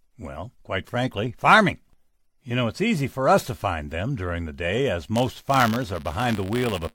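A speech recording that, from 5.15 s to the end, takes on a robotic 100 Hz buzz riding on the voice. This is buffer tearing: writer and hardware reader have slipped inside the ring buffer, so each 10 ms period carries a small sliver of audio roughly 20 ms stale, hard-joined on both sides.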